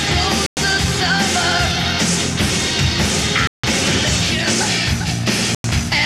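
Bluetooth stalls at 0.46 to 0.57 s, 3.47 to 3.64 s and 5.55 to 5.64 s: the sound drops abruptly to silence for about 105 ms, 162 ms and 95 ms, then resumes just as abruptly. The likely cause is radio interference delaying packets on the wireless link, so the headphones' small playback buffer emptied and output paused until retransmitted audio arrived. The longest gap is near 3.5 s.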